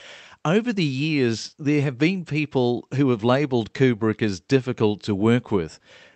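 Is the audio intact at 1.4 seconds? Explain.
Yes, the speech at 1.4 s is intact, with nothing breaking up the signal at that moment.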